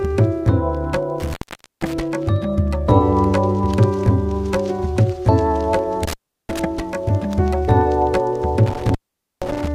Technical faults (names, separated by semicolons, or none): intermittent contact